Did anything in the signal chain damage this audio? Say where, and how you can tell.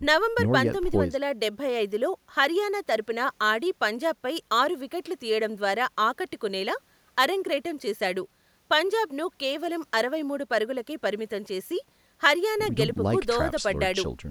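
No, nothing I can hear points to damage anywhere along the chain for this speech recording.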